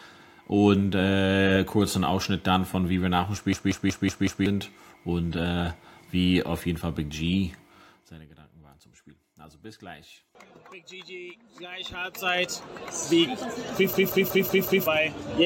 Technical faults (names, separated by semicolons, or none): system hang loop; zipper noise